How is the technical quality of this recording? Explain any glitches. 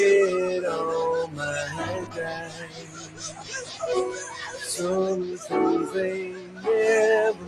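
The recording has noise-suppression problems throughout. A speech noise suppressor was left on for non-speech audio. It treats steady sound as noise, so the level swings by around 15 dB.

There is also sound cut by the noise suppressor at 2.02 to 2.18 s, 2.39 to 3.51 s and 6.23 to 6.66 s. The drops reach about 8, 10 and 11 dB.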